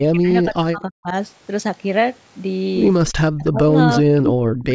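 From 0.0 to 1.14 s the speech sinks by roughly 35 dB in broken pieces, likely speech suppressed in double talk, with the canceller ducking its own talker; the waveform envelope collapses into gappy fragments. At 3.08 to 3.12 s a faint repeat about 30 dB down, likely an echo leak arriving 299 ms late, shows as a thin, short smear on the spectrogram. The same suppression, again likely from double talk, returns about 40 dB deep from 3.18 to 3.71 s and from 4.0 to 4.74 s, leaving near-silent holes in the waveform.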